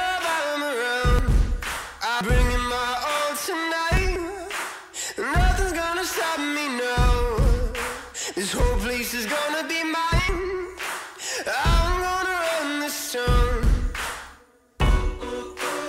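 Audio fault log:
1.19–1.37 s, 2.21–2.58 s, 3.97–4.25 s, 10.10–10.38 s and 13.63 s: compressed frames skipped. Whole blocks of coded audio never reach the output, so the sound lurches forward. The first three jumps lose about a fifth of a second each. The last two lose about a tenth. Each gap spans whole frames.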